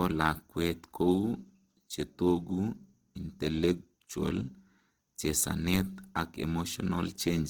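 Throughout the clip, the speech sounds grainy and rough. The likely cause is Opus compression in its music mode. Band energies survive, but starved fine detail is filled with folded or noisy content. The damage is plainly audible. Bandwidth stays full, to 20.2 kHz. This fits a bitrate near 16 kbps.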